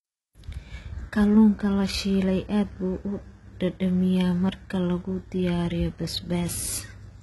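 From start to finish, the speech has a synthetic top end that cuts off above about 11.8 kHz, with gritty, lispy sibilants, pointing to heavy HE-AAC compression at a bitrate around 16 kbps as the likely cause: the treble is rebuilt from copied lower bands, so its harmonics misalign.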